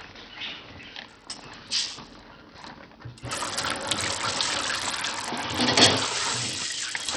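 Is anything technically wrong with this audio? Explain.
Yes. Throughout, the treble drops in and out and a gritty, aliased hiss rides on the sound. That is likely Bluetooth SBC compression, heavily starved, consistent with about 64 kbps: a few wide sub-bands lose their bits. Unlike MP3's swirling, watery artefacts, this damage is coarse and grainy.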